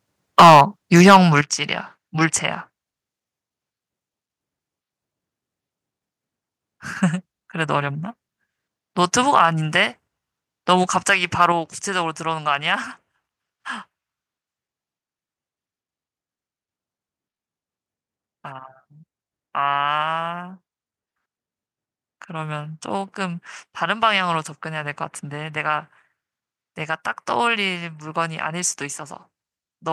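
Microphone overload starts at 0.39 s and lasts until 0.61 s. The peaks run about 10 dB past the converter's limit, and roughly a third of the samples are flattened. The loudest syllables turn harsh and crackly. The likely cause is input gain set too high. At 0.40 s the microphone volume is stepped down by about 3 dB. The voice and the background drop together, which likely comes from the call software reacting to the clipping. A second overload runs from 0.96 to 1.17 s. It sits about 9 dB over, and around a tenth of the samples are cut. At 1.41 s a larger step down of about 9 dB follows, and the level falls sharply. Brief, milder overloads come at 9.36 to 9.41 s and 11.10 to 11.13 s, each about 1 dB over, and at 11.41 to 11.46 s, about 2 dB over. They sound like short gritty edges. At 11.52 s the volume steps down again, by about 4 dB.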